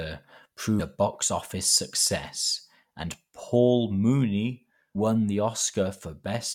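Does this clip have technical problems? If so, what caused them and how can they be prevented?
Yes. Brief bursts of damaged data in a compressed stream interrupt the speech at 0.79 s and 4.95 s, each a blip lasting under 20 ms. Corrupted bytes make the decoder misread a frame, lose sync and hunt for the next valid frame header. To prevent it, verify file or stream integrity with checksums and use a reliable transfer.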